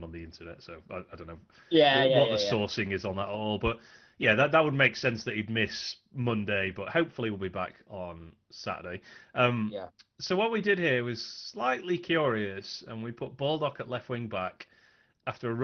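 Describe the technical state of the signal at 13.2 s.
At 13.2 s the speech signal is intact, with no dropout, glitch or other fault, only the ordinary band-limited character of an Opus call path.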